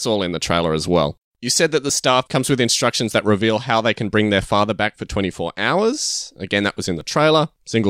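A speech recording with periodic USB or driver dropouts. From 0.88 s, just after "in the trailer as", to 7.01 s, about seven ticks fall every 1.02 s, each where a few milliseconds are skipped outright. That clockwork spacing sets it apart from random packet loss.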